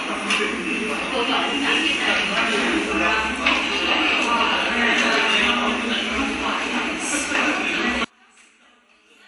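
From 8.05 to 9.28 s, one channel inverted is the likely cause: the reversed polarity cancels the shared content in mono, dropping the sound by about 36 dB to a faint residue.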